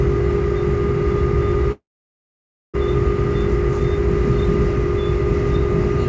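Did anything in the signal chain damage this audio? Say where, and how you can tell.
Yes. At the network and jitter-buffer stage there is a call audio freeze from 1.72 to 2.76 s. The last sound is stretched into a brief fading tail, then about 0.91 s of near silence. The audio then resumes exactly where it stopped, so nothing is lost and everything after it runs about 1.02 s late. That rules out a dropout, which cuts material away. Delayed packets likely starved the buffer. Nothing above 8 kHz fits the G.722 path.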